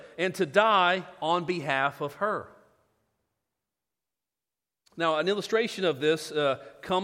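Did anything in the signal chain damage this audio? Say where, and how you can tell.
No, nothing along the chain seems to have touched this speech recording; there's no damage to point to anywhere in it.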